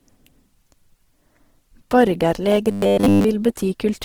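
Speech runs through the whole clip with a rough, grainy texture that is most likely Opus compression in its music (CELT) mode. The audio is clearly damaged, consistent with a low bitrate near 16 kbps. Content still reaches full bandwidth, so the band has not narrowed. The artefact is granular noise in place of the hollow, swirling holes that MP3 leaves, because Opus fills starved bands with noise or folded copies of lower bands. From 2.71 to 3.24 s the speech turns into a rigid metallic buzz fixed at 100 Hz, the likely result of robotic sound from repeated short buffers. A 10 ms fragment is being looped while the real audio is skipped, and the repeats fill most of that stretch. Unlike a dropout, there is no silence, and unlike the codec's grain, this buzz has a steady pitch that follows the speaker only roughly.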